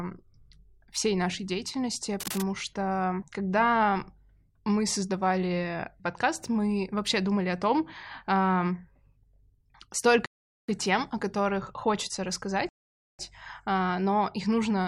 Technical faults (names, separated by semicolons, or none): cable scratch noise; rebuffering stall